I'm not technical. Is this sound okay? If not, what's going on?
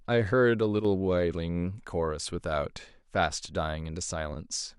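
No. Around 0.80 to 0.85 seconds, for a brief moment of about a twentieth of a second, the speech suddenly dips in loudness and then comes straight back. The likely cause is one channel dropping out: the recording has two sides, left and right, and one side briefly went silent. When both sides are blended for playback, whatever they shared loses half its strength, so the speech momentarily sounds quieter.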